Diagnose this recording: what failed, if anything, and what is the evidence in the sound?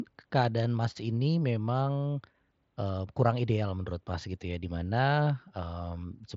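Nothing in this speech recording points to a failure at any stage. The top of the spectrum stops at 7.7 kHz, with a slight grain on the louder passages, which is what the Bluetooth mSBC headset codec sounds like when it is doing its job.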